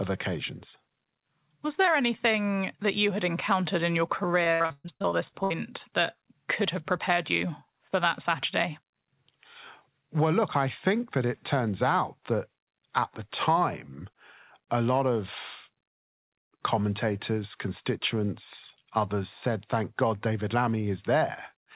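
Speech carried over a WebRTC call path, band-limited with nothing above 4 kHz, which fits a G.711 mu-law telephone codec. From 4.44 to 5.52 s, between "had encountered in your" and "that could have prepared", repeated packet loss produces a choppy, robotic stretch. Around a dozen dropouts follow one another, the longest 124 ms. The receiver conceals each by extending the preceding sound, so nearly half of that span is synthetic fill and roughly 480 ms of the original is missing.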